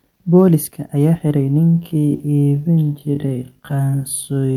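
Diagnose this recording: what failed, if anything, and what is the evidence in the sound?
From 1.57 s to the end the speech abruptly slows to 0.52 times its pace, yet pitch holds and the speech drags. This is a time-stretched section, likely software repeating short pieces to lengthen it. A sample-rate mismatch would also drop pitch.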